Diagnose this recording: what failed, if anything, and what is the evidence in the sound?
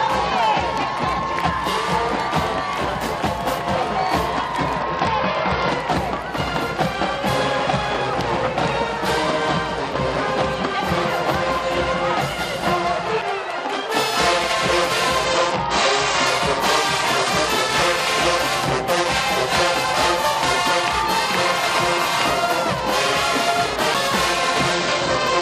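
Two faults are present: a Bluetooth SBC bit pool drop on the wireless link and a CD skip at the disc playback stage.

The Bluetooth link came under congestion three times, and the sending device cut the SBC bit pool to keep audio moving: 4.79 to 5.69 s, 15.25 to 16.27 s, and from 24.73 s to the end. In each stretch the top end goes dull and a gritty, grainy noise sits on the audio, consistent with a bit pool falling from about 31 to 10, near 77 kbps. The highest sub-bands are starved and the rest coarsely quantised, then quality returns, except in the last stretch, which runs to the end.

The CD transport lost tracking twice, at 13.21 s and 23.94 s. A knock or disc flaw threw the laser onto a different turn of the spiral. Each event is a tick with a mute of only a few milliseconds, after which the audio resumes from a different point rather than continuing seamlessly. The jump is a whole number of disc revolutions, which is why the material lurches abruptly instead of fading or stuttering.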